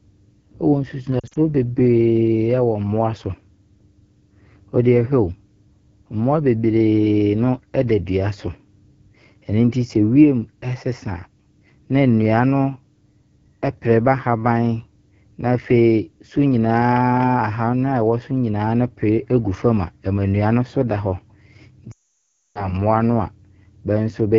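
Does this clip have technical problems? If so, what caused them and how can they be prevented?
Yes. Throughout, the speech has the rough, raspy texture of the AMR wideband (HD Voice) codec at a low rate, which fits 8.85 kbit/s. A spectrogram shows detailed energy only up to 6.4 kHz, a smeared noise band to 7 kHz, and nothing above. Using 12.65 kbit/s or higher prevents this.

Lost AMR speech frames cause two problems. From 1.20 to 1.37 s, scattered losses totalling 0.1 s in runs of up to 40 ms cause brief warbles. From 21.91 to 22.73 s, a 0.64 s loss makes the decoder repeat stale settings at falling gain. The sound drops to near silence within two frames, and returns weak before "no a". The waveform shows a decaying envelope and then a flat gap. Better radio coverage and stronger error protection prevent this.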